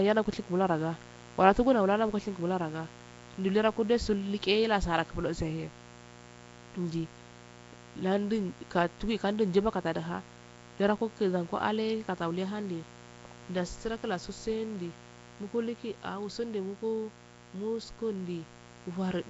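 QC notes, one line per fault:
Throughout: mains buzz. A steady, raspy buzz sits under the speech, roughly 20 dB below it. Sharp switching spikes twice per 60 Hz cycle build a dense ladder of harmonics. That is why it rasps instead of humming, and reaches well into the kilohertz range.
Throughout: Nellymoser compression, the likely cause of the damage. The speech carries a rough, hissy halo and a smeared, underwater quality. Weak bands are replaced with noise, and nothing remains above 7.7 kHz. The coarseness fits a 32 kbps Nellymoser Asao stream.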